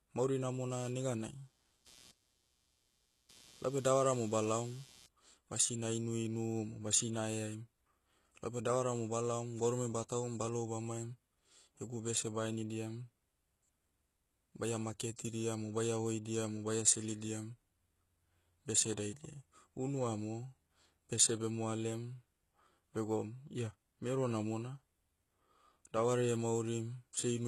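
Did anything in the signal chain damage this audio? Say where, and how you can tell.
Yes, in two places. First, in the analogue wiring, there's computer activity noise from 0.71 to 5.07 s: a buzzy, chirpy pulsing at roughly 150 Hz, about 25 dB under the speech. That's processor or graphics load shifting the shared ground, so it tracks the machine, not the talker.

Second, at the codec and storage stage, the whole clip stops dead around 12.3 kHz and carries the artefacts of the first, low-rate encoding. That's likely low-bitrate audio saved at a high bitrate, with something like a very low-rate HE-AAC pass re-encoded to a fat MP3. The second encode can't restore what the first threw away.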